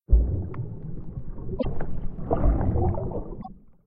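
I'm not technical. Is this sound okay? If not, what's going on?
No. A broken MP3 bit reservoir at 1.58 to 1.65 s and 3.41 to 3.48 s: the sound skips briefly, likely because missing chunks left later frames reading the wrong data.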